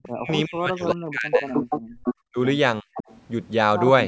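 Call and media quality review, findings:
Echo leak: delayed copy of the talker audible at 0.03–0.33 s and 0.88–0.94 s (369 ms lag) and at 1.32–2.15 s and 2.94–3.17 s (463 ms lag), at about -15, -10, -5 and -10 dB relative to the direct speech. Likely far-end loudspeaker pickup that the echo canceller left unremoved. Spectrogram: duplicate of the harmonic stacks shifted right by the lag. Waveform: tail trailing the syllables.

Speech suppressed in double talk: talker level collapses in pieces across 0.08–1.5 s, about a second affected in total, with dips of roughly 40 dB. Shorter drops at 2.27–2.38 s (roughly 40 dB) and 2.82–2.88 s (roughly 30 dB). Likely echo canceller unable to separate near talker from echo during overlap and attenuating both. Spectrogram: vertical gaps and faded upper harmonics. Waveform: envelope notches.

Background gated by the echo canceller: room tone dips about 16 dB at 1.81–1.99 s, roughly 200 ms, inside the 463 ms echo stretch. 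Canceller clamps the microphone while the loudspeaker is active, then releases. Spectrogram: brief darker band across the noise floor. Waveform: noise floor steps down, then recovers. Call microphone processing is audible as band-limiting, with nothing above 8 kHz.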